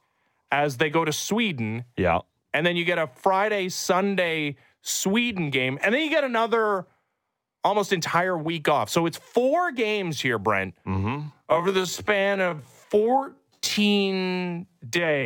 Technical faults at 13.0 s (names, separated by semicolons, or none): time-stretched section